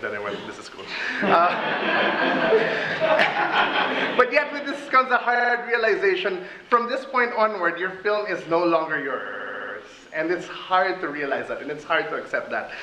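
A stutter runs from 5.34 to 5.53 s, where a 46.4 ms block loops four extra times. A longer one from 9.24 to 9.73 s replays a 69.7 ms block seven times. These are repeated frames, duplicated compressed data that adds 0.19 s and 0.49 s.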